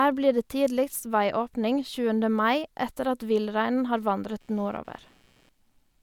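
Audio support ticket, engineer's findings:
Computer activity noise, 4.40 s to end, right after "villreinen har". Buzzy chirping pulsing at around 150 Hz, roughly 40 dB below the speech. CPU, GPU or mouse load shifting the shared audio ground. Spectrogram: faint, regularly spaced vertical striations under the speech.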